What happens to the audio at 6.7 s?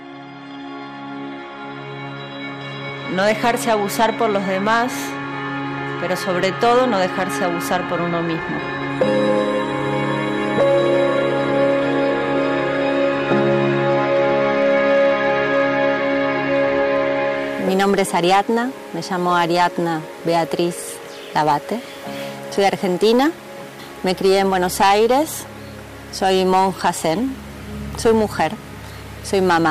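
At 6.7 s the audio has hard clipping, present throughout: peaks driven about 8 dB past full scale are cut flat, giving crackly harshness on loud moments, flat-topped waveform peaks and bright vertical streaks on the spectrogram.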